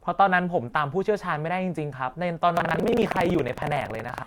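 From 2.55 s to the end of the clip, the speech takes on a steady robotic rattle at about 21.5 Hz, which fits a 2048-sample buffer. This is buffer tearing. The writing and reading positions in the ring buffer have slipped past each other, so most of each period repeats audio from about a tenth of a second earlier, spliced in with hard joins. Unlike an underrun, there are no silent gaps, and the buzz stops whenever the speech pauses.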